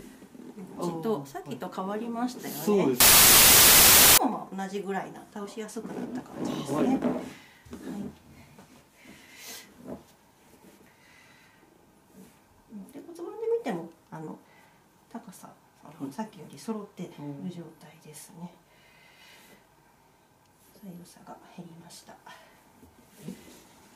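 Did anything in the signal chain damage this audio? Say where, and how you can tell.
Yes. From 3.00 to 4.18 s the sound is swamped by loud, harsh broadband noise. This is samples built from the wrong bytes at the sample-format conversion stage: misaligned or swapped bytes push fast-changing low bits into each value's most significant part.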